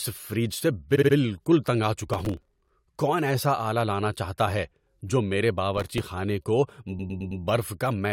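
At 0.95 to 1.14 s there's a stutter from repeated frames, where a 64 ms chunk gets replayed, adding 192 ms. Processor overload crackle hits at 2.14 to 2.70 s and again at 5.78 to 6.00 s: tiny buffers of a millisecond or two miss their deadline and leave stale snippets, so a gritty tearing rides over the sound. Repeated frames return at 6.98 to 7.41 s, looping a 106.7 ms block and stretching things by about 427 ms.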